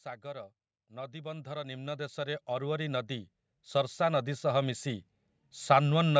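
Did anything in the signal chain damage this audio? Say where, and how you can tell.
Yes: automatic gain rising in the call processing stage. From 0.21 s to 5.97 s the speech and background noise swell together by about 18 dB, the AGC steadily raising gain on an input it judged too quiet, with the band still ending near 8 kHz.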